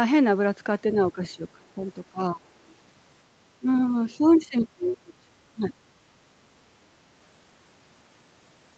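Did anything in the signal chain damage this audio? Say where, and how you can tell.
Yes. Speech suppressed in double talk appears at 1.12–1.85, 2.09–2.55, 3.59–3.66, 4.18–4.26, 4.48–5.2 and 5.54–5.75 s. The voice dips in level by anything from a slight amount to about 25 dB, deepest around 4.5–5.2 s. This happens in the call processing stage. The likely cause is the echo canceller meeting both sides talking at once. It couldn't tell the near voice from loudspeaker echo, so it turned the whole signal down.

The other side's voice leaking through is heard faintly at 1.29–1.33 s, about 40 dB under the speech, and again at 4.31–4.46 s, about 30 dB under. These are brief scraps of a second voice sitting behind the talker. They also belong to the call processing stage. The echo canceller most likely left residual loudspeaker pickup in the microphone signal, and the leaks fall inside or right beside the same busy stretches where the suppression dips occur.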